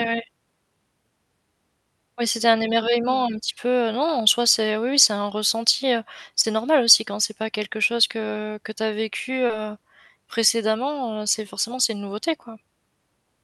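Around 6.41 to 6.45 s, right after "c'est un ressenti heu", and again at 9.47 to 9.51 s after "que tu as vécu", there's short concealed packet loss. About 20 ms went missing each time, and the receiver papered over it by extending the preceding sound, leaving a brief smeary wobble.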